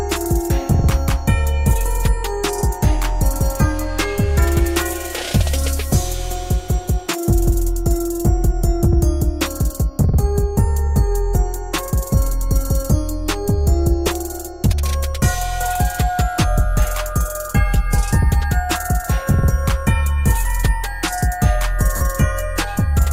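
Lost LE Audio frames at 14.07 s and again from 21.96 to 22.01 s: the Bluetooth LE Audio link dropped data, and the LC3 decoder filled each gap by repeating the last good spectrum with randomised signs. The first gap lasts 10 ms, which fits one lost frame, and sounds like a brief noisy blip. The second lasts 50 ms, pointing to about five frames in a row, and the concealment smears into noise and starts fading before the sound resumes. The light lossy compression across the clip leaves at most a faint watery texture on noise and attacks.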